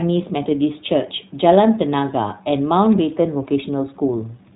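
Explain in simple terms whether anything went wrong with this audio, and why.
The whole clip went through the iLBC codec, a low-quality phone-call format, and the damage is easy to hear from start to finish. Nothing above about 3.8 kHz survives, so the speech sounds muffled and boxy, like an old phone line. The sound is chopped into 20 ms chunks, each squeezed on its own. That leaves the speech clear but slightly rough and synthetic.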